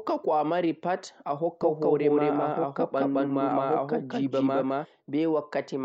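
From 1.62 s to 4.86 s the speech carries a doubled audio track. A second full-band copy trails the original by about a fifth of a second. It sits at roughly the same level, so both layers compete equally. The copy has no decay and no room colour. It begins and ends abruptly. The likely cause is the same signal being captured twice, once through a slower path.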